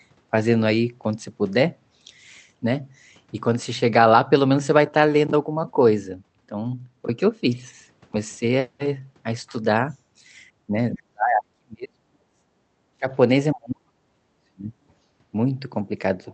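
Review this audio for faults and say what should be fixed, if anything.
Speech suppressed in double talk occurs at 10.96–12.45 s, 12.95–13.09 s and 13.54–14.76 s. The speech falls by up to roughly 40 dB. An echo canceller likely mistook the talker for echo and muted both. Better double-talk detection in the canceller would prevent this.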